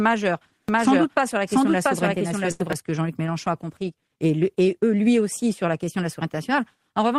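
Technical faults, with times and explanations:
0.69–2.73 s, doubled audio track: a full-band copy of the speech runs roughly 0.7 s behind the original at about the same level. It has no decay or room colour and starts and stops abruptly, likely from a second, slower capture path or an edit holding two out-of-step copies.
2.51–2.62 s, burst of packet loss: about 80 ms of audio arrived too late or not at all. The receiver extended the last sound for 83 ms, turning it down as the gap went on, then resumed further along with that stretch missing.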